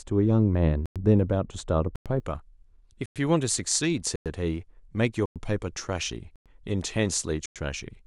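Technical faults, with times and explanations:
0 to 2.2 s, de-emphasis applied wrongly. A treble cut meant to reverse pre-emphasis has been applied where none was present, or applied a second time. The response falls smoothly toward the top end, reaching about 11 dB down at 10 kHz relative to 1 kHz. Consonants lose their edge and air. The speech sounds dull and muffled, as if heard through a cloth. It brightens after 2.2 s.
0.86, 1.96, 3.06, 4.16, 5.26, 6.36 and 7.46 s, gap between chunks. Each hole lasts 100 ms. The audio arrives in 1-second chunks, and silence is inserted at every join. Nothing is dropped; the speech is only pushed later each time. So the holes recur every 1.1 s, a steady stutter running through the whole clip.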